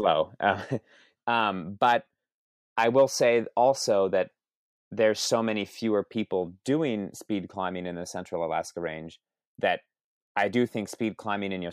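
At 0.61 s the speech abruptly drops by about 6 dB and stays quieter to the end, with nothing returning. The likely cause is one channel dropping out: once one stereo side goes silent, the mono sum carries only half the shared signal.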